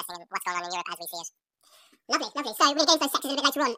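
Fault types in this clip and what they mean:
Audio read two samples at a time (double speed): the whole speech clip plays back at twice its proper rate, so everything's rushed and pitched a full octave up, giving that chipmunk quality from start to finish. What's happening is the reader is grabbing pairs of samples and treating each pair as one frame, as if the data had two channels or wider samples, so the whole recording plays out in half the time.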